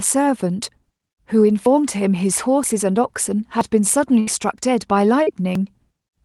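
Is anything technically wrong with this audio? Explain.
Yes. Three kinds of fault affect this speech.

Audio missing between chunks: at 0.69, 1.66, 2.64, 3.61, 4.58 and 5.55 s, about a second apart, the sound jumps forward. Each time roughly 30 ms is lost, likely while the processor closes one one-second chunk and opens the next. The waveform shows an abrupt splice, often with a click, and the spectrogram shows a hard vertical seam.

Burst of packet loss: from 4.19 to 4.30 s, about 80 ms of audio is missing. The receiver fills roughly 76 ms by extending the preceding sound and fading it, so the result is a held buzz or hiss. On a spectrogram this appears as smeared, flat horizontal bands that dim before normal detail returns.

Short concealed packet loss: from 5.23 to 5.30 s, about 40 ms never reached the decoder. The gap is filled by continuing the last sound, which is then blended back into the real audio. 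It is heard as a brief smear or wobble. The spectrogram shows a short blurred patch.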